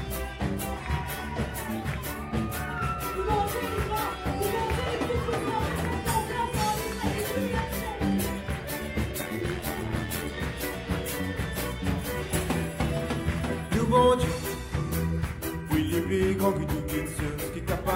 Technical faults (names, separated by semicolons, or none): overlap-add ripple